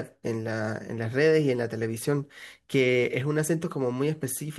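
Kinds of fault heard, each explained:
No technical faults are audible in this speech.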